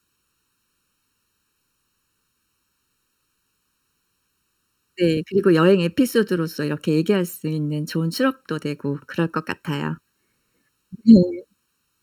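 Speech throughout, with channel delay (comb filtering): one channel lags by roughly 0.7 ms before the mono sum, carving evenly spaced notches from about 700 Hz upward, so the speech sounds hollow and phasey.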